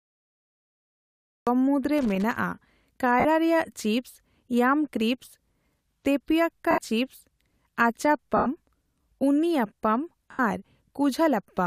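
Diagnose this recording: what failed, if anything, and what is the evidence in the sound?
Cut-off start, 0 to 1.47 s. The file holds digital silence until 1.47 s, and then the speech enters mid-sound, with no natural attack or fade-in. This is a storage or capture fault. Recording or streaming began late, so the opening of the utterance was never written, and the first samples jump straight from zero into an already-running waveform.

Loose connector crackle, 1.98 to 2.36 s. For a little under 0.4 s there is an irregular burst of scratchy crackle over the speech. The stage is the analogue wiring. A worn or dirty contact made and broke repeatedly as it shifted, chopping the signal on and off, and each reconnection of any DC on the line added pops.

Lost LE Audio frames, at 3.20 s (about 50 ms), 6.71 s (70 ms), 8.37 s (90 ms) and 10.31 s (80 ms). At each point the speech briefly turns into a grainy, noisy smear that fades rather than stopping dead. 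These are gaps in the Bluetooth link. The lengths fall in 10 ms steps, which fits the frame size of the likely LC3 stream. To fill each gap, the decoder replayed the last spectrum with randomised signs and faded it out.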